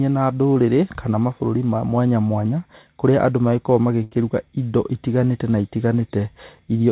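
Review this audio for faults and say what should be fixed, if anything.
At 0.54 to 0.57 s there is a short concealed packet loss, heard as a brief smear. Roughly 20 ms of audio never arrived, and the receiver bridged it by extending the preceding sound for about 12 ms before blending back into the real signal.

At 4.03 to 4.13 s a burst of packet loss leaves about 80 ms missing. The decoder extends the last sound over that stretch, letting it fade as the gap lengthens, then resumes further along with the intervening audio gone.

Both losses sit on a narrowband call path with nothing above 4 kHz, which fits G.711 mu-law at 64 kb/s. To prevent them, add forward error correction or redundancy and size the jitter buffer to absorb late packets on this link.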